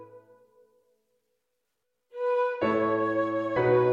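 At 3.55 s there is a sudden, very short glitch, gone almost as soon as it starts. This is damaged data in a compressed stream. A small stretch of the encoded file is corrupt. The decoder cannot read the frames there correctly, so it loses its place. It then hunts forward for the next valid frame header to resume decoding. The garbled output during that search sounds like a tiny squawk or blip.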